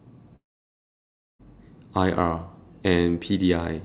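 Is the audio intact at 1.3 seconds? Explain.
No. At 1.3 seconds there is only silence or a low steady noise. From 0.36 s the last sound is stretched into a buzzy, fading tail that dies away within about a twentieth of a second, and nothing real returns until about 1.42 s. That gap of just over a second is likely a long network dropout: packets stopped arriving, the receiver concealed the loss briefly, then went quiet, and the lost stretch was never recovered.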